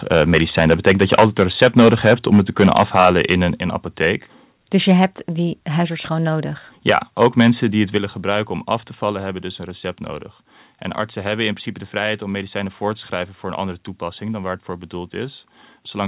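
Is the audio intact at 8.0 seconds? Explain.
No. At 7.98 s the call software likely stepped the microphone volume down, cutting the device's input gain in a single jump of about 5 dB. Right after "die het", the speech and its background both drop abruptly in level and stay quieter into "gebruiken om af te".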